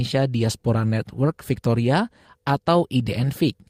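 Nothing stood out on listening to this speech recording.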